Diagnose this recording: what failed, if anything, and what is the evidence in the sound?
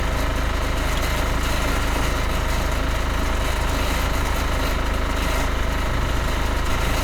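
Nothing in the audio stood out as a fault on listening, so there is no failed stage to point to.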